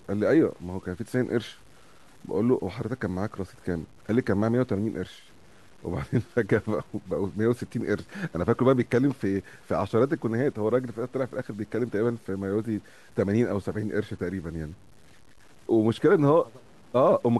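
A speech clip with grainy, rasping distortion running through its whole length, most noticeable as the voice trails off, where quiet syllables roughen and pauses sputter or drop to dead silence. The error sits roughly 35 dB under the signal and moves with it, which fits low bit depth without dither, likely from truncation to around 8 bits. A dithered version would leave a steady hiss that stays put through the pauses.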